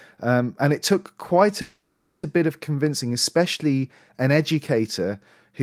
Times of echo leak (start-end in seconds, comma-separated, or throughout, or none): none